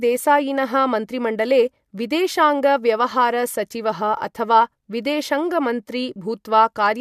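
No technical faults can be heard anywhere in the clip.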